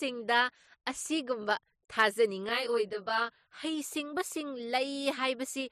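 From about 2.49 to 3.65 s the speech turns rough and slightly doubled. That's channel delay (comb filtering): one channel lags the other by roughly 20 ms, and summing them to mono cancels shared content at evenly spaced notches starting down around 20 Hz.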